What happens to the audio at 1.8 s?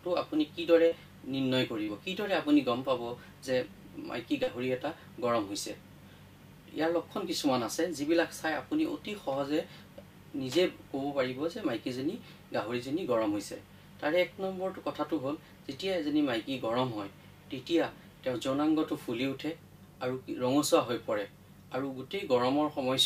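From 1.83 to 1.90 s there is a short concealed packet loss: about 40 ms of audio failed to arrive, and the receiver filled the gap by extending the preceding sound before blending back in. It is heard as a brief smear or wobble.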